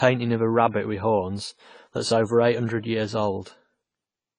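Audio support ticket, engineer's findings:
AAC compression, throughout the clip, 0 to end. Speech dull and smeared, plainly audible warbling and fizz on sibilants. Likely AAC-LC encoder starved of bits; damage fits a low bitrate near 24 kbps. Encoder lowers cut-off, leaves spectral holes, fills bands with substitute noise.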